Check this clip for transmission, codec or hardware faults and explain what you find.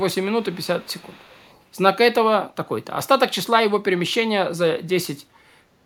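An echo leak is present, from 0.0 to 0.15 s and from 0.42 to 1.63 s: a far-end loudspeaker echo likely slipped past its canceller, returning a faint copy of the speech about 0.4 s late, roughly 30 dB down.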